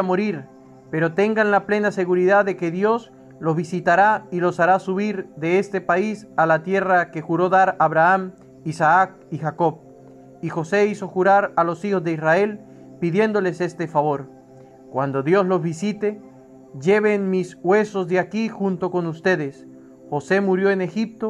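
No technical faults are audible.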